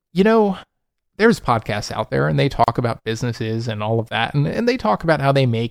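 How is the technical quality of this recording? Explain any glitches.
The recording has one glitch, a short dropout in the speech. There is a gap at a join of encoded pieces from 2.64 to 2.68 s: two separately encoded segments were butted together without trimming encoder delay and final-frame padding, leaving a gap of about 38 ms with smeared edges before the speech resumes exactly where it stopped.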